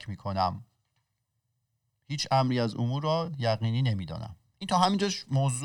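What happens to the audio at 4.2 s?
Nothing goes wrong at 4.2 s; the speech continues intact through that moment.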